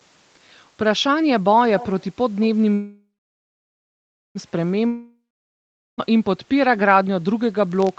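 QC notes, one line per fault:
1.79–2.06 s, echo leak: the far end's echo canceller likely failed to remove what its microphone picked up from the loudspeaker, so a copy of the speech returns about 177 ms late, around 15 dB below the direct voice, as a faint doubling.
2.74–4.38 s, call audio freeze: packets stalled in transit, likely draining the jitter buffer, so the last sound is stretched into a fading buzz and then about 1.28 s of silence. Speech then resumes where it stopped, with nothing lost but about 1.6 s of delay added.
4.87–6.12 s, long network dropout: audio likely stopped arriving over the network, so the receiver extends the last sound into a decaying buzz, then about 0.78 s of silence. When speech returns, roughly 1.12 s of it is gone and the sentence jumps ahead.
7.72–7.99 s, filter restarted on every block: a filter resets its state at each block boundary, so every block opens with a small transient. 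These repeat at 46.9 Hz, which fits 1024-sample blocks, and are heard as a low buzz riding on the speech that rises and falls with its level.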